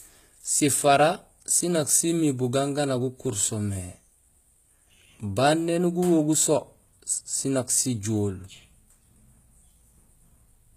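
The speech was likely squeezed through HE-AAC compression at a very low rate, something near 20 kbps, across the whole clip. Only the lower spectrum is truly coded, and the treble is rebuilt by copying lower bands upward under a rough envelope, with nothing at all above 14.9 kHz. The damage is plainly audible: the top end sounds bright but artificial, and s sounds come out gritty, metallic or lisping.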